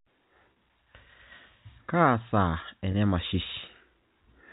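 Speech over a G.711 A-law telephone path, band-limited below 4 kHz, has packet loss with pitch repetition: gaps of 30 ms at 0.53–0.56 s and 20 ms at 2.92–2.94 s (consistent with three and two lost packets) were bridged by repeating the last pitch period, leaving brief held, buzzy moments.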